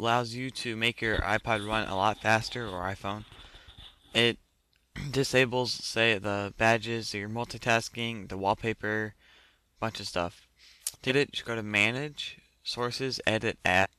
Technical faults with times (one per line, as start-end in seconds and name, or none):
11.08-11.12 compressed frames skipped
13.82-13.86 compressed frames skipped